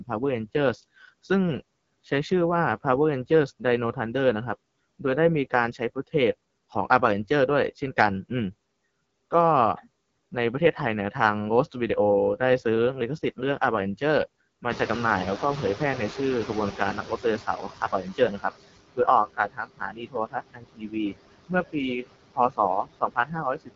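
From start to finish the speech has a rough, raspy edge, and nothing reaches above about 7.5 kHz. This is the AMR wideband (HD Voice) codec at one of its lowest rates; the grain fits the 8.85 kbit/s mode. At that rate the codec's pulse-driven model of the vocal tract cannot follow the voice closely, so the result sounds coarse rather than clear, and the top of the band is only shaped noise.

Throughout, the background sinks in the pauses and swells back under each phrase. These are noise suppressor artifacts: the suppressor pushes the bands it judges to be steady noise down by about 20 dB, frame by frame, so the residue keeps moving with the speech.

The room noise jumps by about 20 dB at roughly 14.5 s. From 14.7 to 18.49 s that louder noise comes through less reduced and only gradually settles lower. The noise suppressor is catching up: its noise estimate lags the sudden change and takes about 3.8 s to adapt, ending at about 15 dB of reduction.

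The speech then starts losing pieces. Parts sound swallowed or faded at 17.03 to 17.25 s, 17.47 to 18.44 s, 19.26 to 21.14 s, 22.33 to 22.59 s and 22.83 to 23.7 s. The dips range from about 9 dB up to about 21 dB, and the longest stretch affects around a second of sound. This is speech cut by the noise suppressor. With the noise now only about 11 dB below the voice, it mistakes quieter parts of the speech for background and turns them down too.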